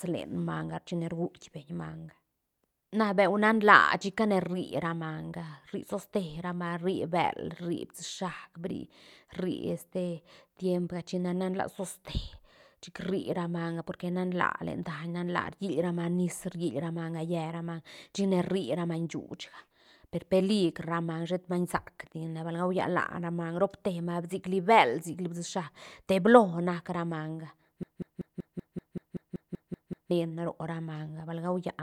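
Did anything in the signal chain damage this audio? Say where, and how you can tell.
Yes. The playback or streaming buffer likely stalled and kept resending the last block it held, producing a broken-record loop. From 27.83 s to 30.11 s, a 191 ms fragment of speech repeats exactly twelve times back to back, and the speech that belonged there is lost.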